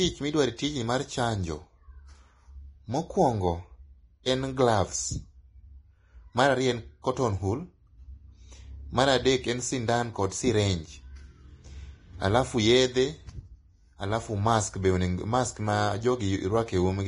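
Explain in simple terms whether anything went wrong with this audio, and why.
Vorbis compression, heard from start to finish, is the main problem. The speech sounds hissy and grainy, and everything above about 10.6 kHz is missing, so it sounds dull and rough. This is likely the result of squeezing the audio into a small file: the encoder keeps only a rough outline of the treble and replaces the fine detail with noise, which is why the crisp edges of sounds come out fuzzy.

Pre-echo appears from 4.23 to 4.26 s: a brief hiss, about 25 milliseconds long, arrives just before a sharp sound, making that sound seem smeared and soft. The same squeezing process works on short chunks of audio and spreads its noise evenly across each chunk. When a sudden loud sound lands late in a chunk, noise meant to be hidden by that loud part also fills the quiet moment before it, where you can hear it.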